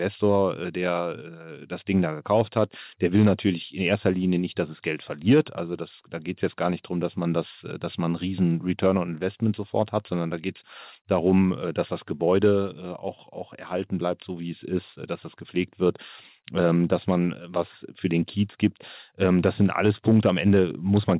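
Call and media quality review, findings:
Nothing to flag here: the speech comes through the call path as you'd expect for a mu-law phone codec, with the usual telephone-band ceiling around 4 kHz and nothing that needs a ticket.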